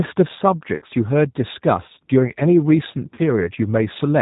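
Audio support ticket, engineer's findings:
G.729 codec throughout. Band-limited speech with nothing above 4 kHz. Rough, slightly synthetic texture with plainly audible damage. Character points to G.729A at 8 kbit/s. Mechanism: decoder rebuilds each 10 ms frame from a vocal tract filter, a pitch predictor and a few fixed pulses per half-frame. Sparse pulses cost naturalness. The missing top band comes from the narrowband design. Component: codec negotiated on the call path.

VoIP packet loss concealed by the speech codec, twice. First at 0.76–0.85 s. About 60 ms of audio is missing, which fits three lost packets. Second at 3.14–3.20 s. About 40 ms is missing, which fits two packets. Symptom: speech smears into a buzzy tone or coloured noise that fades. Mechanism: the decoder repeats its last pitch and filter at falling gain. Each frame builds on the last, so the voice stays weak briefly after packets resume. 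Component: network jitter or loss upstream of the decoder.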